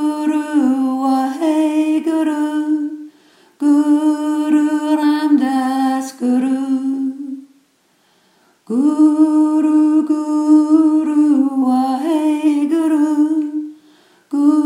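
Nothing stood out on listening to the audio.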